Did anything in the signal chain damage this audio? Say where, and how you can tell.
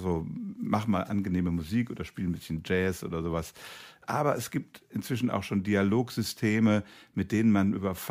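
No, nothing in the chain audibly damaged this speech.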